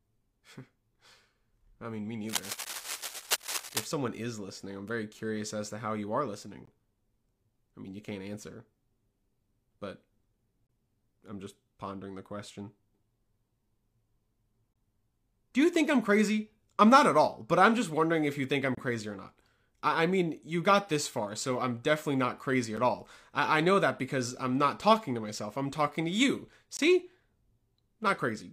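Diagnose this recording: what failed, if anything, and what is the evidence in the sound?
Analogue wiring: cable scratch noise from 2.29 to 3.84 s, dense uneven rustling nearly as loud as the speech. This is likely a worn connector or cable being moved. Its irregular texture distinguishes it from regular digital clicks.

Network or playback: a gap between stream segments, hard-edged silences of 8 to 25 ms at 2.65, 6.65, 10.67, 14.73, 18.75, 22.77 and 26.77 s. The strict four-second spacing fits 4-second segments with misaligned timestamps. Unlike packet-loss dropouts, no audio is removed.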